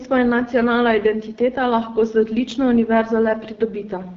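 Throughout the speech, an AMR wideband (HD Voice) codec runs at one of its lowest modes, which fits roughly 8.85 kbit/s, and its pulse-driven vocal tract model leaves plainly audible damage: the speech turns rough and raspy, with nothing above 7.5 kHz.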